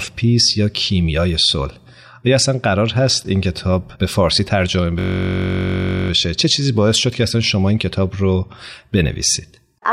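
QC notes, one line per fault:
4.99–6.10 s system hang loop: a 21.33 ms slice, which fits a 1024-sample buffer, repeats exactly, making a steady 46.9 Hz buzz rather than a dropout's silence.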